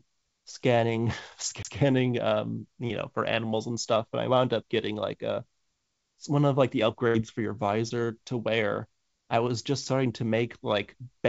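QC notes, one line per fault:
1.63–1.65 s, CD skip: A tick and a very brief mute, and the speech then carries on from a different point rather than where it left off, so a little of the flow is displaced. The laser was knocked or hit a flaw and jumped to another turn of the disc's spiral. The player muted for a moment while it relocked, then resumed from that new track position, which is why continuity breaks at the tick.
7.08–7.16 s, burst of packet loss: The last sound is drawn out for about 65 ms, voiced parts turning into a held buzz and the rest into a fading hiss. The speech then picks up further along with roughly 60 ms absent. Several consecutive packets went missing or arrived too late to play. The receiver extended the final good audio and faded it over the gap before rejoining the live stream.
7.88–7.92 s, short concealed packet loss: A brief smear or wobble, with about 15 ms of synthetic fill and roughly 20 ms of real audio gone, so a short consonant may drop out. 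This sits on the band-limited call audio, which has nothing above 8 kHz. A packet missed its decode deadline, so the receiver continued the preceding sound from its pitch or as shaped noise and then crossfaded back into the actual signal.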